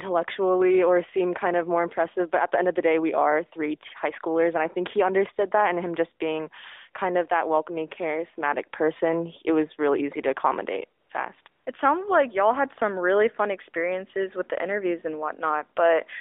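Three times the sending phone's voice activity detection judged the talker silent and stopped transmitting speech frames, so the receiver filled each gap with AMR comfort noise, a synthetic hiss built from a rough estimate of background level and spectrum. Just after "really easy to accommodate", the real background gives way to this smooth, steady noise from 11.00 to 11.10 s, 11.42 to 11.46 s, and 11.48 to 11.66 s, switching abruptly in and out within the narrowband 300 Hz to 3.6 kHz phone-line sound.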